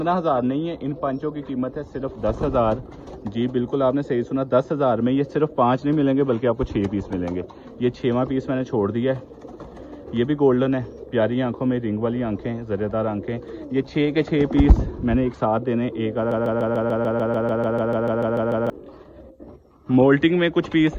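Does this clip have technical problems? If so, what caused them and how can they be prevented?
Yes. From 16.32 to 18.70 s, a broken-record loop repeats one 147 ms fragment sixteen times, likely from a stalled player or stream resending its last buffer. Unlike echo, the copies never fade. Keeping buffers filled and muting on a stall, rather than replaying held audio, prevents it.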